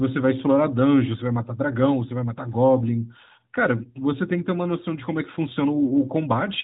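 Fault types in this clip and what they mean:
No faults can be heard in this clip.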